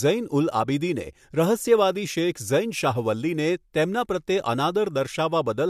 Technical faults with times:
none

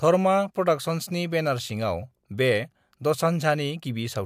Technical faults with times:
none

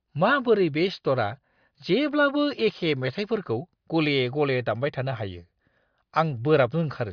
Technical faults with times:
none

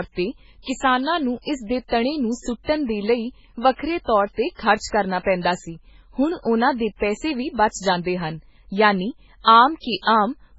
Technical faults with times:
0.00-10.58 MP3 compression

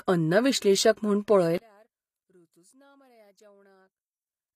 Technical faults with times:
0.00-4.56 HE-AAC compression
1.58-4.56 one channel inverted

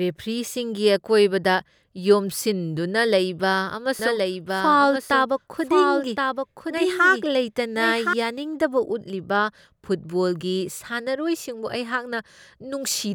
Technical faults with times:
3.99-8.13 doubled audio track

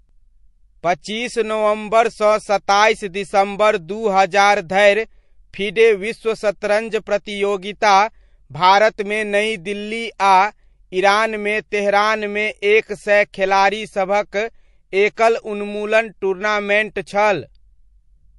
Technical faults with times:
0.00-18.38 MP3 compression
11.69-11.72 pre-echo
15.15-15.17 pre-echo

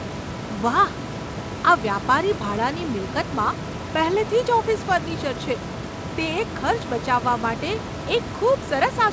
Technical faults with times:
none

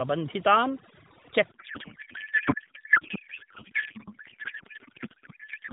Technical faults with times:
0.00-5.72 overdone noise removal
1.52-5.72 codec payload misread

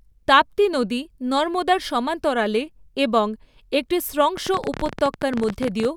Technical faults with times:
4.37-5.86 train of clicks

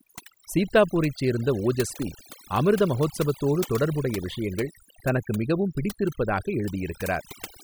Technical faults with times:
0.00-7.63 overdone noise removal

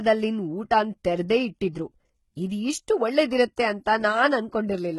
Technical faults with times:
0.00-4.98 HE-AAC compression

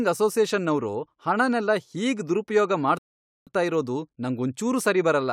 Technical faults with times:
2.98-3.47 rebuffering stall

